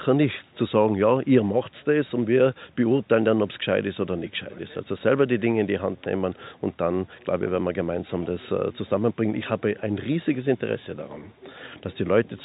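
No technical faults are audible.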